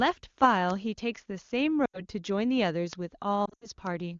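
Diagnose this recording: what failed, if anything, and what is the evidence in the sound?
Lost AMR speech frames, at 1.86 to 2.01 s and again at 3.45 to 3.67 s, are a network or radio-link fault. In the first, about 80 ms of speech, which fits four 20 ms frames, goes smeared and quickly sinks toward silence. In the second, about 120 ms drops out in patches across 160 ms, with the longest gap 80 ms, giving a broken, warbling stretch. The AMR decoder covers each missing frame by repeating the last good pitch and vocal tract shape at a falling level. In wideband the fade is quick, so speech returns briefly weak and rough after each gap. Around these gaps the speech has the full, bright band of high-rate HD Voice.

Bit error spike, at 2.93 s, is a storage or digital-transport fault. It is a single sharp tick lasting one sample, broadband and unrelated to the surrounding speech. A flipped bit in a memory word or on a digital link makes that sample jump by a power of two. 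The next sample returns to the correct value, leaving one isolated click rather than a burst or a dropout.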